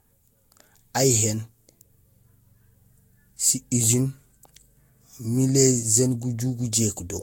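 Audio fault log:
throughout: generation loss. The speech sounds swirly, smeared and hollow, with blurred attacks. Nothing remains above 16.6 kHz. This likely comes from lossy re-encoding about four times, which fits a Vorbis codec near 64 kbit/s. Each pass adds fresh quantisation noise.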